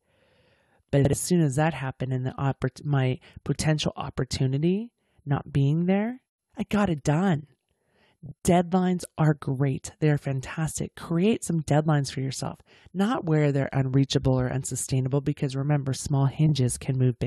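Frames out of order at 0.97 to 1.13 s, 8.26 to 8.32 s and 16.46 to 16.52 s: in each, two adjacent blocks of speech play swapped. The first exchanges two blocks of about 78 ms each, which fits runs of three frames; the others swap single blocks of about 26 ms. Each sounds like a brief garbled flutter, and no time is lost.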